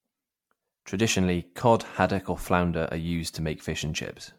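Generation loss runs through the whole of this speech, from start to finish. The sound is swirly and hollow, with smeared, watery high frequencies and consonant attacks that blur rather than snap. That degradation is worse than a single moderate-rate MP3 pass would leave, which points to repeated decoding and re-encoding at around 96 kbit/s, likely about seven passes. Each generation requantised the audio on a shifted frame grid, stacking fresh noise and spectral holes onto the last.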